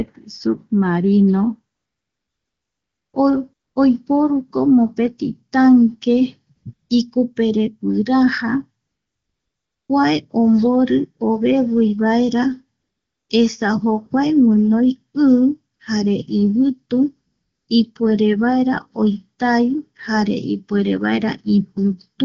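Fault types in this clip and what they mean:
AMR comfort noise: Pauses are filled with smooth synthetic hiss in place of the real background, switching in eight times, longest near 1.75 s and after "ikupere guiraja".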